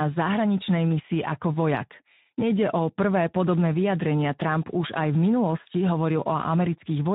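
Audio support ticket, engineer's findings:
Speex codec artefacts, throughout. Speech hoarse, gritty and noisy; damage plainly audible. CELP coder starved of excitation bits, consistent with a low-to-mid quality setting around 11 kbps. Upper band thin, noise-like fill rather than real detail.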